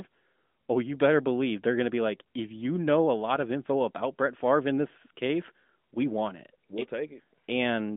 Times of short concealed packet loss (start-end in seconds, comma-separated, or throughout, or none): none